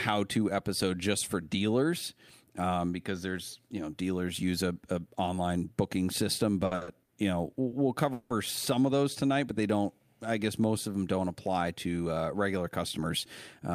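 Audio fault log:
6.65–7.12 s, repeated stalls (stutter): the speech catches and drags in four quick hitches, the longest about 60 ms, with 210 ms of stretched sound making up nearly half of this half-second stretch. Packets kept reaching the receiver late, so its jitter buffer emptied again and again, and each time it prolonged the last sound until fresh audio came in. Nothing is lost from the speech; it is simply held back in small, uneven jerks.
7.68 s, short stall from a late packet: a single sound hangs on slightly too long, about 30 ms, before the speech carries on. One packet was not there when its turn came, the jitter buffer ran dry, and the receiver extended the previous sound to cover the wait. When the packet turned up, playback resumed from the same point, so nothing is skipped, only delayed by that 30 ms.
8.13–8.32 s, call audio freeze: the speech stops moving forward for about 170 ms while the last sound lingers as a fading tail rather than dropping to silence, then the speech picks up where it left off. 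This is likely a burst of packets held up on the network, leaving the jitter buffer empty long enough that the receiver had to keep synthesising from the last sound. The speech resumes intact, with the gap inserted rather than anything removed.
12.57–13.71 s, jitter buffer speed-up: over this final second or so the speech sounds a little rushed, running at about 106% of normal speed while the pitch stays unchanged. The buffer held more than its target, so the receiver trimmed tiny pitch-period-sized slices many times in succession, dropping roughly 70 ms in total to bring the delay back down.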